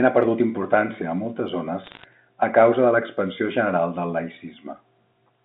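Bit errors on a digital phone line occur from 1.84 to 2.04 s, between "perdut importància a moltes" and "a causa de l'expansió". Flipped bits in the 8-bit logarithmic G.711 samples each corrupt a single sample, and hits on the sign or upper bits throw it far off, giving sharp ticks. At roughly 0.7 percent of bits, they merge into a brief crackle laid over the speech, which itself stays intact within the narrow telephone band.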